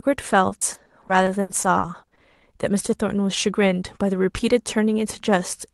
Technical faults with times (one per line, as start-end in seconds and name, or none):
0.49-2.37 repeated packet loss (robotic sound)